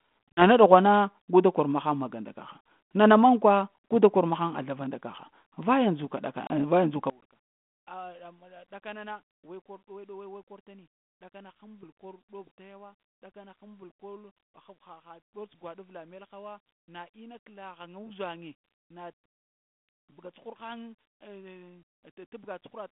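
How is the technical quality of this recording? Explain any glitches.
There are two kinds of trouble here: a couple of brief dropouts early on, and a big collapse in level for the whole second part of the speech. All of it comes through a narrow telephone band of roughly 150 Hz to 3.5 kHz, with the light grain you'd expect from G.726 ADPCM at 32 kbit/s.

Packet loss on an ADPCM call shows up at 0.32 to 0.43 s, just before "ɗughwana guda kor", and again at 6.47 to 6.52 s, right after "nda kaha vaya ndzuka". About 50 ms and 30 ms go missing, which suggests a handful of packets each time, filled with hard-edged silence. The decoder's predictor and step size then lose track of the sender's, so the sound comes back slightly distorted before settling.

From 7.1 s to the end, the level drops by about 26 dB and the sound turns faint. That's the signature of one channel inverted: with one stereo side's polarity reversed, summing to mono cancels almost everything the channels share. 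That is likely what happened here, leaving only a faint residue of their differences.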